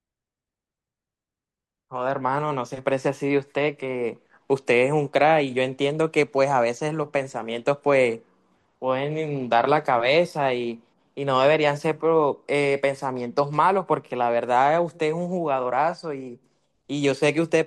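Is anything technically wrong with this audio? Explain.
No, nothing technically wrong turns up anywhere in this speech recording.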